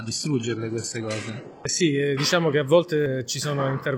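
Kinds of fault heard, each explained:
adaptive stream starting at a low bitrate: until 2.0 s the sound is dull and smeared, fitting a roughly 12 kbit/s HE-AAC start, then jumps without a gap to cleaner, about 96 kbit/s AAC quality. A spectrogram shows nothing above 11.5 kHz, then abruptly fuller upper bands. The waveform stays unbroken.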